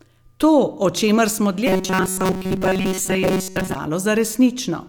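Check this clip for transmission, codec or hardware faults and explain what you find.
One fault is present: robotic sound from repeated short buffers, from 1.67 s to 3.75 s. Across that stretch the speech becomes a rigid, metallic buzz pitched at 188 Hz that only loosely follows the spoken contour. The likely cause is audio arriving too seldom, with the playback side covering the gaps by looping the last short buffer. A 188 Hz buzz fits a buffer of about 5.3 ms, repeated for most of the span while the real audio is skipped.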